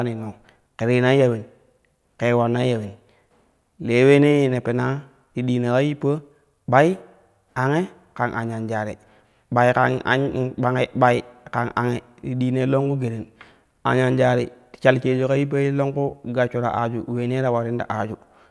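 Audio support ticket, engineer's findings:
Listened to the whole speech recording and found nothing to flag, so there's no fault to log on this ticket.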